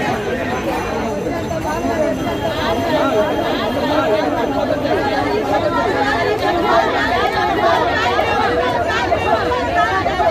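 From the start and through the whole clip, a doubled audio track is heard: a second, full-band copy of the sound trails the original by about a second, at roughly the same level. It is likely that a second capture through a slower path, or an edit holding two copies out of step, left both in the mix. Unlike an echo or reverberation, there is only one repeat, with no decay, no room colour and no fading tail.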